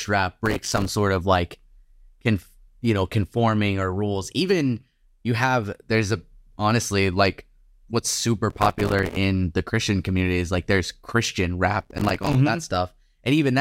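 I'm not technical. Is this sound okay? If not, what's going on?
No, there are three short bursts of processor overload crackle, at 0.46 to 0.88 s, 8.50 to 9.16 s and 11.81 to 12.35 s. The computer couldn't keep up, missing dozens of tiny few-millisecond chunks of speech in a row, each replaced by silence, so it sounds gritty and torn.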